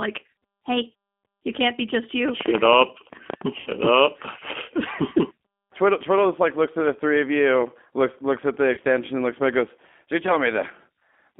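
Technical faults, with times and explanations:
Throughout, G.729 codec: the speech is confined to a telephone band of roughly 250 Hz to 3.5 kHz, so it sounds thin and lacks air. It is intelligible but noticeably rough and synthetic, because the decoder rebuilds each 10 ms frame from a vocal tract filter, a pitch predictor and a few pulses rather than the original waveform. The grainy, buzzy texture fits an 8 kbit/s G.729A coder.
2.29–3.42 s, train of clicks: about ten sharp ticks of similar shape ride over the sound at roughly 9.8 per second, unevenly spaced, and peak some 15 dB above the speech, so they stand out clearly. Pulses repeating for about a second at this rate point to something injecting impulses into the signal path. The likely cause is electrical interference from nearby equipment or a faulty connection or power supply.
3.60–3.71 s and 8.73–8.80 s, VoIP packet loss concealed by the speech codec: at both points the speech briefly turns into a stretched, buzzy tone or coloured noise that fades. 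Missing audio forced the decoder to keep extrapolating from its last pitch and filter settings while lowering the gain. The first gap covers 60 ms, which fits three lost 20 ms packets, and the second covers 40 ms, which fits two. The speech stays weak for a moment afterwards while the decoder's state recovers.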